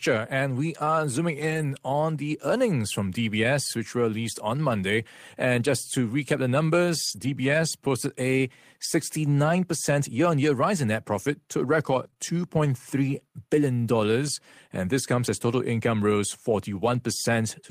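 At 1.41 to 1.63 s, a lost packet is rebuilt from error correction. The sound points to about six lost packets. A low-bitrate copy in the following packet fills 120 ms, so nothing drops out. Those frames turn rougher and noisier. The same happens from 4.69 to 4.75 s, right after "which were released on", rebuilding 40 ms. It happens again from 7.07 to 7.29 s, just before "posted a", rebuilding 120 ms.

From 12.03 to 12.18 s, right after "net profit to a", repeated packet loss gives a robotic sound. Three holes fall close together, the longest 17 ms. Each is patched by carrying the last sound on. About 29 percent of the stretch is concealed, and pieces are missing. It sounds choppy.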